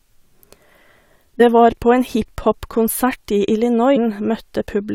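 Damaged data in a compressed stream in this speech clip causes brief blips at about 1.40 s and from 3.96 to 3.98 s, where corrupted frames break decoder sync until it locks onto the next frame header.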